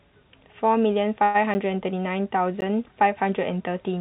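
From 1.24 to 1.37 s the speech stalls into a fading buzz: a call audio freeze, likely from packets delayed long enough to empty the jitter buffer. About 100 ms of stretched sound fills the wait, and the speech resumes where it stopped, now running late. Unlike a dropout, it has no hard edges and nothing is lost.

At 1.54 s and again at 2.61 s there are brief holes, each a block of digital silence about 10 and 14 ms long. The signal drops straight to silence and returns without a fade, so each is heard as a tick rather than a fading fill. Throughout, nothing is heard above 4 kHz, which fits a G.711 mu-law call path.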